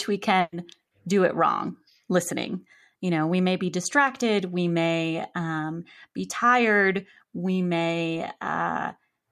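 Speech, with a burst of packet loss from 0.40 to 0.53 s, before "do it wrong listening". Unlike a plain dropout, the gap is mostly filled with the last sound fading out rather than silence, and the audio resumes with 120 ms of speech missing.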